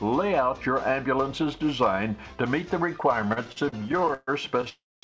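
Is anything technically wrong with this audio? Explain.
Yes. From 3.22 to 4.67 s there are repeated stalls (stutter). Late packets kept draining the jitter buffer, so about twenty short fills, up to 134 ms, make the sound drag and stutter. At 4.69 s a call audio freeze starts, likely from packets held up in transit. The last sound is stretched and fades, ending in about 240 ms of silence through 5.03 s. The call path cuts everything above 8 kHz, which fits a wideband call codec.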